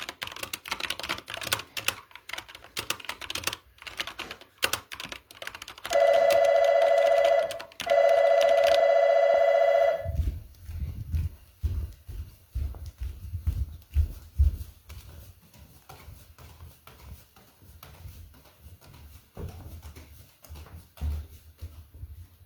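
No technical faults can be heard anywhere in this recording of sounds; the signal stays steady and intact throughout.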